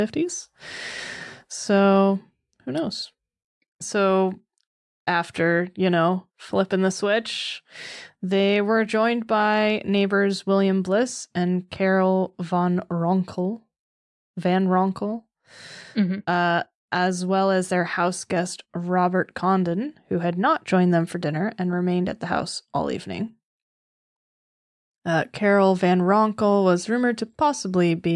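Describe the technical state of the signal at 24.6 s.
At 24.6 s the speech signal is intact, with no dropout, clipping, glitch or other audible fault at that moment.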